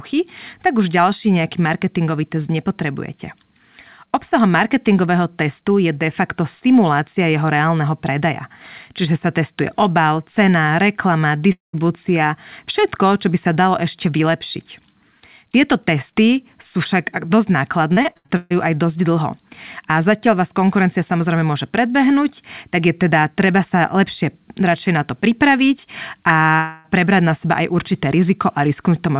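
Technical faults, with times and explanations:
11.52–11.75 s and 26.56–26.86 s, long network dropout: right after "testuje obal cena reklama" the audio smears into a fading buzz for about 0.21 s, then goes silent. The second one, just before "prebrať na seba aj", is about 0.28 s of fill with no silence. Both likely come from packets that never arrived.
17.93–18.52 s, repeated packet loss (robotic sound): six quick holes, the longest about 0.14 s, with over half this stretch patched by stretching the last bit of audio. That makes it choppy leading into "aj dosť". It's all over the narrowband G.711 call path, which caps everything at 4 kHz.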